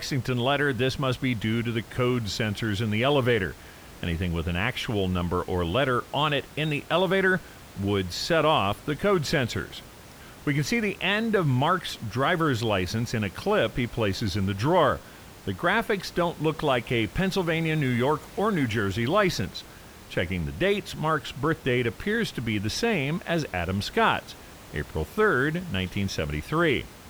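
No technical faults are audible.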